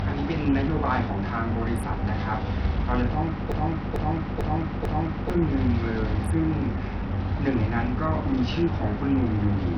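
Throughout the speech, channel delay causes comb filtering: one channel lags by a few samples, about 0.07 ms, so the mono sum hollows out with a first notch near 7 kHz.

Also throughout, treble flickers and grit rides on the speech with nothing above 19 kHz, likely from heavy Bluetooth SBC compression at a bitrate around 64 kbps.

From 3.52 to 5.30 s a broken-record loop repeats a 445 ms fragment four times back to back, likely a stalled stream resending its last buffer; the intervening speech is lost.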